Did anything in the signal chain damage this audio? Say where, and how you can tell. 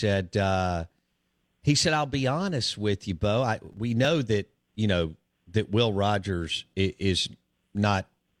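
Yes. Between 3.61 and 3.78 s the speech breaks into a short burst of processor overload crackle, which points to the driver or buffer stage. A handful of buffers, each around 5 ms, missed their deadlines, and each miss was filled with silence, so the audio stutters with hard-edged gaps. On the waveform these show as brief flat dropouts with abrupt cuts. On the spectrogram each cut draws a thin vertical broadband streak.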